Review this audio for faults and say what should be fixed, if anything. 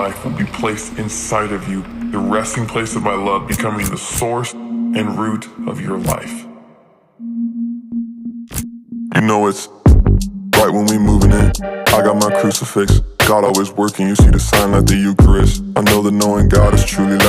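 Nothing needs fixing; no faults turned up on listening.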